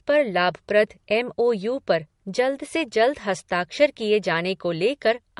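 Speech runs the whole way through with nothing above 11.2 kHz and a layered coding texture, likely from transcoding between lossy codecs, a sound that fits an MP3 at 48 kbit/s re-encoded as AAC-LC at 64 kbit/s. Unlike a single low-bitrate encode, two kinds of artefact sit together here: the MP3 pass's residue and AAC's own artefacts on top, since the second encoder spends bits reproducing the first one's damage.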